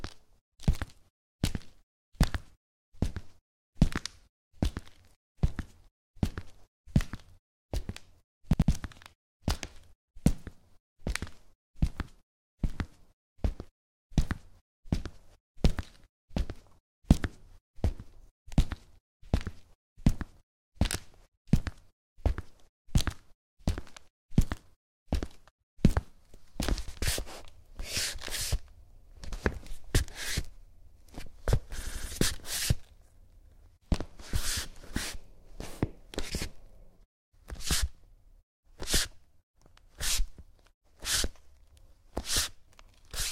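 Repeated buffer faults at 8.53 s, 26.88 s and 31.83 s: fresh audio arrived late, so the same 85 ms block, which fits a 4096-sample buffer, replays two, one and three extra times. Each repeat gives an audible stutter with hard joins, while nothing is skipped.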